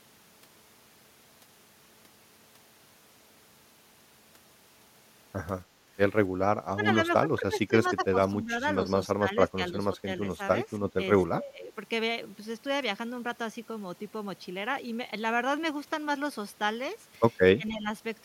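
From 6.74 to 6.86 s, then 7.2 to 8.62 s, the speech is pushed down by up to about 20 dB: speech suppressed in double talk, likely an echo canceller muting its own talker while the far side spoke. On a waveform the envelope sags in chunks. Inside that stretch, at 7.86 to 7.90 s, a faint echo leak appears: a scrap of the voice returning 266 ms late, about 30 dB under the speech, likely residue the canceller failed to remove. It shows as a weak copy of earlier harmonics. The same ducking returns at 9.14 to 10.39, 10.79 to 10.9, 11.35 to 11.76 and 17.57 to 17.9 s, each dipping roughly 10 to 15 dB.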